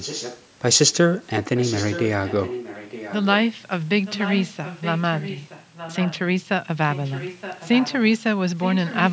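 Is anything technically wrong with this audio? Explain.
Yes, there's an echo leak. A delayed copy of the speech, trailing it by 920 ms and roughly 10 to 15 dB quieter, shows up at 0 to 0.45, 1.56 to 2.07, 2.26 to 3.37, 4.05 to 6.2, 6.88 to 8.19, and 8.61 s to the end. It's likely that a speakerphone's echo canceller let some of the loudspeaker audio slip back into its mic.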